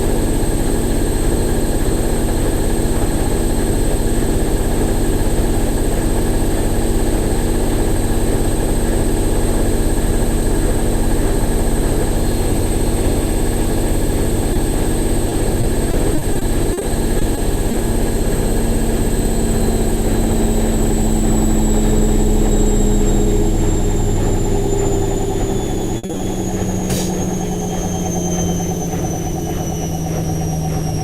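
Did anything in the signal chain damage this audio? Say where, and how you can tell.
Yes, at the network stage, where two kinds of damage show up.

Short concealed packet loss appears as four isolated events at 14.53, 17.19, 17.35 and 17.71 s. Each is a brief smear where roughly 20 ms of audio failed to arrive in time. The receiver patched each hole by extending the preceding sound, using its periodicity where there was one or shaped noise where there wasn't, then crossfaded back into real signal. That makes the event sound like a momentary wobble rather than a clean dropout.

Repeated packet loss (robotic sound) occupies two stretches. From 15.29 to 16.83 s, about nine gaps totalling 200 ms were concealed, the longest 40 ms, covering 13% of that span. From 25.97 to 26.21 s it is much denser: four gaps totalling 140 ms, the longest 60 ms, filling 58% of the span. Because each hole is bridged by continuing the last audio and the next loss follows soon after, the sound turns choppy, with pieces missing.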